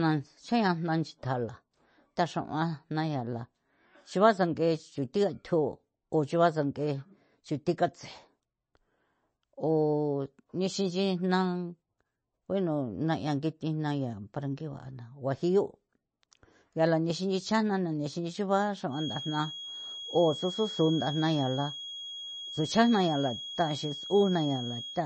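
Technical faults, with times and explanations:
Throughout, MP3 compression: the speech sounds watery and swirly, with nothing above about 8.3 kHz, so s sounds lose their edge and attacks smear. Likely a low-bitrate MP3 encode, which fits around 32 kbps, cutting the treble and switching weak frequency lines on and off between frames.
18.88 to 25.06 s, feedback whistle: starting just after "xana na nexinxion ba", a thin, steady tone near 3.3 kHz sits behind the speech, around 10 dB below it and swelling and fading slowly in level. Likely a loudspeaker-to-microphone loop held right at the edge of feedback, sustaining that one frequency.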